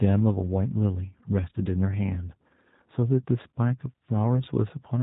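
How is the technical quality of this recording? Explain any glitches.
The recording has been through a narrowband low-bitrate voice codec, and its damage is plainly audible from start to finish.

G.729 codec, throughout the clip: the speech is rebuilt from a vocal tract filter, a pitch predictor and a few pulses per 5 ms half-frame rather than from the actual waveform, which fits an 8 kbit/s stream. The result is intelligible but rough and slightly synthetic, with a buzzy texture. Nothing passes above 3.8 kHz, so consonants lose their crispness and the sound is muffled and telephone-like.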